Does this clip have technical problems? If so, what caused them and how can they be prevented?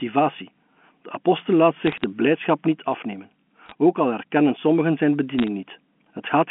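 Yes. Bit errors on a digital phone line cause crackle in three short bursts: 1.87 to 2.04 s, right after "de apostel laat"; 3.66 to 3.72 s, before "ook al herkennen sommigen"; and 5.39 to 5.48 s, after "al herkennen sommigen zijn". Flipped bits in the logarithmic 8-bit samples each corrupt a single sample, and a hit on a high bit or a sign bit turns that sample into a sharp tick. The error rate is a fraction of a percent. Unlike packet loss, the speech never drops out or repeats. Its narrow telephone band, topping out near 3.4 kHz, continues unbroken under the ticks. Preventing this means fixing the noisy link or adding error detection and correction to the transmission path.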